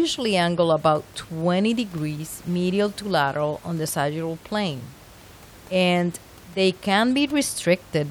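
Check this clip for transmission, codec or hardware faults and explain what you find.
Nothing in this speech recording points to a transmission, codec or hardware problem. The room's own background noise sits about 24 dB below the speech and belongs to the recording itself.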